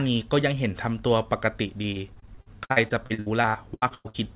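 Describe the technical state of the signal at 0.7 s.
At 0.7 s the speech is intact, with no fault present, only the narrowband sound of a call path with nothing above 4 kHz, as expected from a 64 kbps G.711 mu-law codec.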